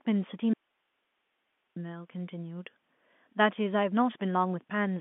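From 0.53 to 1.76 s the speech drops out abruptly for about 1.2 s, leaving only faint hiss roughly 50 dB below the speech. This is an audio dropout to a faint residue, likely from a momentary signal loss with the downstream path still live. The hard edges and the hiss floor set it apart from a natural pause or a fade.

Between 3.18 and 3.20 s comes packet loss with the last packet repeated. One 20 ms stretch is replayed in place of a missing packet, which fits 20 ms packets. It gives a small blip rather than a sustained buzz or a silent gap. Like the rest of the clip, it sits in the narrow 200 Hz to 3.5 kHz telephone band of G.711 coding.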